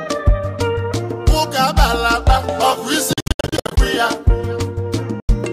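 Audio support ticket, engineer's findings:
Bluetooth dropout, 3.13 to 3.77 s: the audio keeps cutting out in short bursts, about 390 ms gone in total, longest single gap 73 ms. Likely a flaky wireless link dropping packets. Audio resumes further along each time, not where it stopped. Second hit at 5.20 to 5.29 s: about 87 ms gone, same skip-ahead on return. Worth checking range and interference.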